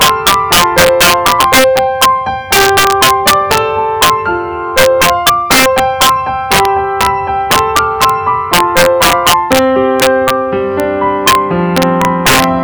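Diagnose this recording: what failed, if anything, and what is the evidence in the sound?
Integer overflow at the sample-format conversion stage, present throughout: loud peaks produce harsh, violent cracks far sharper than clipping. A gain stage driven about 8 dB too hot wraps a small share of samples, around two percent, to the opposite sign instead of limiting them.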